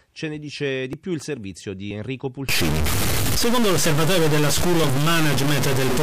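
It's a speech clip with two separate problems. First, there's audio missing between chunks: short skips at 0.93 s, 1.91 s and 3.86 s, each losing somewhere around 20 ms, with the two sides butted straight together and no gap of silence. The spacing fits a process handling the sound in one-second blocks and likely dropping a sliver each time it rolls over to the next block. Second, from 2.49 s to the end there's a stuck bit. The quieter stretches pick up a noise floor that wasn't there before. That's likely one data bit jammed at a fixed value, so roughly half the samples land off by that bit's weight, following the waveform. Near silence the error flips with the sign of the tiny values, which is why the pauses stop being clean.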